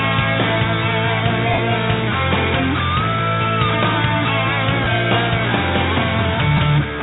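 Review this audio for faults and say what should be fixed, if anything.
Lost LE Audio frames at 1.53–1.58 s (45 ms, fitting six 7.5 ms frames), 4.84–4.86 s and 6.57–6.59 s (15 ms each). The LC3 concealment replays the last spectrum with scrambled signs, so spectrograms show harmonics blurring into noisy smears and waveforms lose periodic shape, sagging during the longest gap. Improve link robustness with better antenna placement, less 2.4 GHz interference, or retransmission margin.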